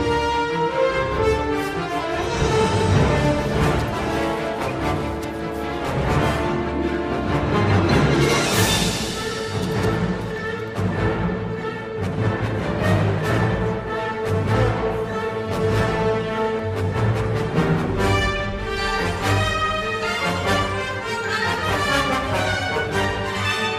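Two sharp clicks, at 9.12 s and 16.59 s, are the marks of dropped samples. At each point the waveform jumps abruptly from one value to a later one, most likely because a fraction of a millisecond of the stream went missing. That gap is far too short to remove any audible sound, so each event shows only as a single thin vertical line across the spectrogram.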